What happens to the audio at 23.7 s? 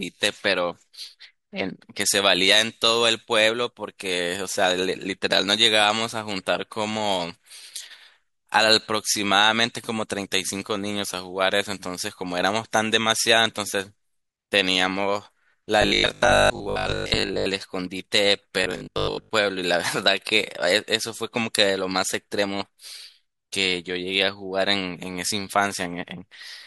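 Nothing goes wrong at 23.7 s; the speech there plays through intact, with no dropout, click, distortion or other fault.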